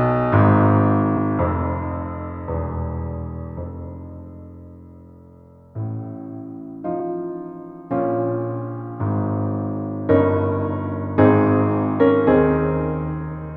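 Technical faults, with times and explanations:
1.17 s and 6.99 s, compressed frames skipped: the decoder drops a damaged or missing compressed frame, so about 30 ms vanishes and the audio jumps ahead.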